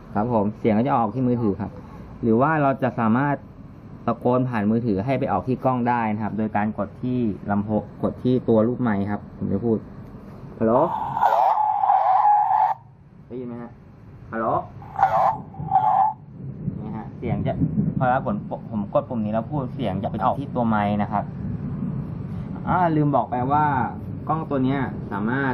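Frames out of order three times: at 17.63 to 17.92 s, 20.05 to 20.36 s, and 22.46 to 22.67 s. Each time, two adjacent runs of frames were decoded in swapped order, so the first two stretches play with their halves exchanged in blocks of about 139 ms (which fits three frames per run) and the last in blocks of about 93 ms (which fits two). Each stretch comes out as a garbled flutter, though no time goes missing.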